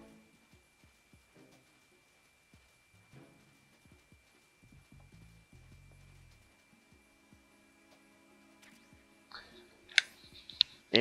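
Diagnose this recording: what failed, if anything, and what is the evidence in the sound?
Nothing in the signal chain shows a failure: no dropouts, clicks, level jumps, distortion or timing disturbances are audible at any stage.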